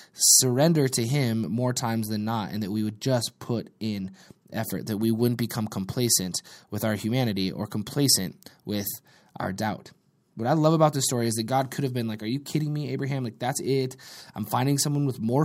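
No technical faults can be heard in this speech recording.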